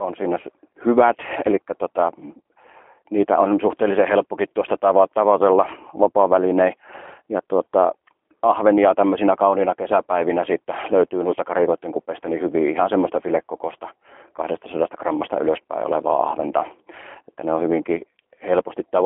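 G.729 coding runs throughout the speech, squeezing it through a telephone band of roughly 250 Hz to 3.4 kHz with nothing above 3.6 kHz. Each frame is rebuilt from a vocal-tract filter, pitch predictor and sparse pulses, which fits an 8 kbit/s G.729A stream and leaves the voice plainly rough and synthetic.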